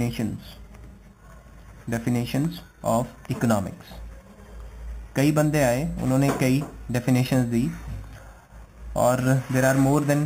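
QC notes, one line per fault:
throughout: imaging from sample-and-hold upsampling. Each original sample has been held and repeated to reach the higher rate with no smoothing filter, so mirrored copies of the spectrum sit above the real content. The lowest copy fills 4 kHz to 8 kHz at about 19 dB below the sound, which fits an original rate of 8 kHz. It adds a bright metallic fizz that rises and falls with the level and moves against the pitch.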